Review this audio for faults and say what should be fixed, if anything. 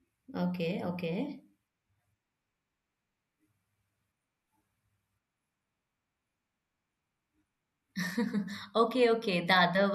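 No faults turn up in this audio, so there is nothing that needs to be fixed.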